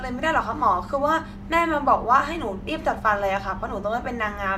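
No technical faults are audible.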